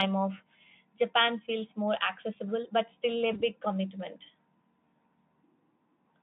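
A brief smear at 0.37–0.41 s, and again at 3.33–3.43 s just after "accessible but still a", is VoIP packet loss concealed by the speech codec. Each time a single 20 ms frame went missing, and the decoder stretched the previous pitch and filter to cover the gap before recovering.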